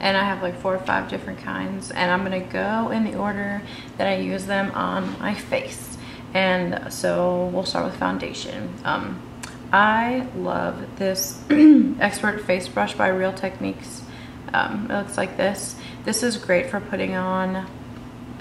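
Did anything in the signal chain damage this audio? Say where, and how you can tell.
No, nothing along the chain left a mark I can hear, so there's nothing to point to at any stage.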